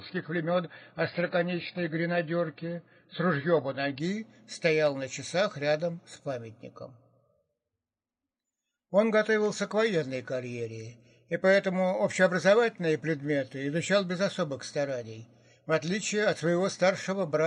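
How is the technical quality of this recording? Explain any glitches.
The opening seconds are noticeably degraded, then the quality jumps. From 0 to 4.0 s the sound is dull and smeared, with nothing above 5.2 kHz and strong codec artefacts. This is an adaptive stream starting at a low bitrate: the player begins on a cheap version, here consistent with roughly 16 kbit/s AAC, then switches without a gap to a much higher-bitrate stream once it has gauged the connection.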